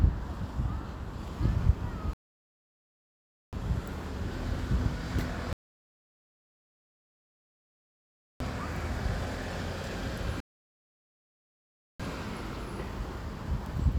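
A recording of everyday sounds interrupted three times by a rebuffering stall, where playback runs dry of downloaded audio and halts until more data arrives. The sound drops to silence at 2.13 s for about 1.4 s, at 5.53 s for about 2.9 s, and at 10.40 s for about 1.6 s, then picks up exactly where it left off each time, so nothing is missing but the clip is stretched. On a waveform these show as flat silent gaps, and on a spectrogram as fully blank vertical bands with clean edges.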